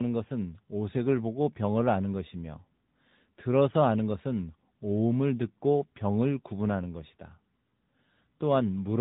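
From start to end, the speech carries tandem speech coding, passed through two speech codecs in a row, with a plain telephone link between them. Each coder re-encodes the previous one's already damaged output, so the errors stack: the voice sounds rough, muffled and warbly, which fits a low-rate mobile codec such as AMR-NB last in line. On a spectrogram nothing appears above 3.8 kHz, and harmonics look smeared and patchy. The waveform shows grainy, uneven envelopes.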